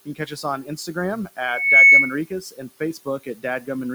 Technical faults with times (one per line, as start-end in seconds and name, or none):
0.00-3.94 noise suppressor artifacts
0.05-0.97 speech cut by the noise suppressor
2.26-3.69 speech cut by the noise suppressor